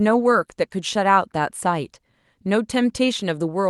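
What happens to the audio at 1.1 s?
Nothing goes wrong at 1.1 s: the speech passes through intact, carrying only the steady band limit near 12 kHz that the Opus call path gives it throughout.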